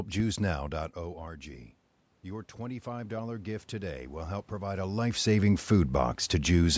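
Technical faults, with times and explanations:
2.23–4.93 s, automatic gain rising: the speech and the room noise behind it swell together by about 6 dB over nearly three seconds, because the gain control found the input had dropped by about 12 dB and slowly raised its gain to compensate.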